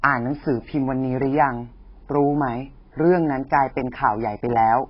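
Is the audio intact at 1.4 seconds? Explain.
No, at 1.4 s the speech is dulled throughout by what is likely AAC compression at a very low bitrate. Nothing remains above 5.6 kHz, and sibilants smear into a warbling fizz.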